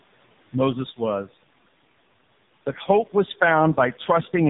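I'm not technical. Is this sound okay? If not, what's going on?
No. Two problems run through the whole clip, from start to finish.

Noise suppressor artifacts: a cleanup process keeps turning the background hiss down between phrases and letting it back up under the speech, so the quiet room sound pumps and flutters. Unlike codec damage, this watery breathing follows the pauses, not the voice itself.

AMR narrowband mobile codec: the speech was squeezed through old-style mobile phone coding at a very low quality setting. Everything above about 3.8 kHz is gone, so it sounds muffled and boxy, and the voice itself comes out buzzy and robotic all the time, not just in the gaps.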